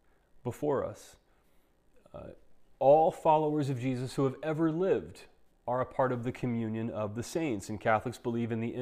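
No technical faults are audible anywhere in the speech recording.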